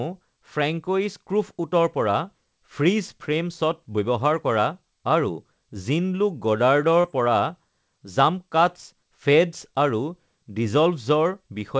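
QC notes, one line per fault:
7.01–7.07 s, short concealed packet loss: about 30 ms of call audio reached the decoder too late, so the receiver stretched the preceding sound across the gap and blended back into the real signal, leaving a brief smear or wobble.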